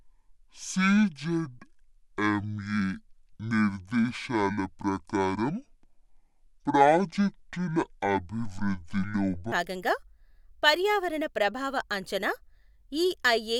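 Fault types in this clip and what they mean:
Section at the wrong speed: from the start to 9.52 s the speech drags at half speed and sits deep, roughly ten semitones low, then snaps back to normal; pitch and pace moving together points to playback at the wrong rate, likely a clock mismatch.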